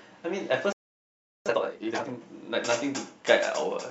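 A speech recording with a playback stall followed immediately by time-compressed catch-up. At 0.73 s the speech halts mid-flow and the output falls silent for about 0.73 s, until 1.46 s. It then resumes from the point where it stopped, with nothing skipped. That is what separates a stall from a dropout, which removes a piece of the audio. The likely cause is the player running short of buffered data or its thread being blocked. From 1.46 s to 2.18 s the player works off that backlog by cutting out small segments and cross-fading the remainder, so the speech runs at twice its normal rate. Unlike a plain speed-up, which would raise the pitch by an octave, the pitch stays where it was. The hurried pace ends at 2.18 s.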